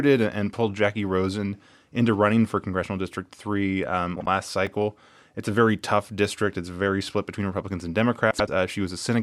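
At 4.15 to 4.27 s the speech has frames out of order: two neighbouring runs of about 52 ms each were decoded in swapped order, giving a garbled flutter. On a spectrogram, formant tracks jump and resume abruptly. The same fault recurs at 8.31 to 8.49 s with longer blocks of about 78 ms.

At 4.67 s a block of digital silence about 2 ms long, zeros likely substituted when the output buffer went unfilled, makes a tick. The waveform shows a flat-line notch with vertical edges, and the spectrogram shows a thin broadband stripe.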